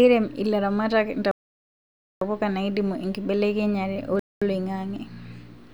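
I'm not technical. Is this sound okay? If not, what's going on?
No. The speech cuts to silence twice, from 1.31 to 2.21 s and from 4.19 to 4.42 s, then carries on. This is likely a Bluetooth stall: interference delayed the wireless audio, so the headphones ran out and paused until it caught up.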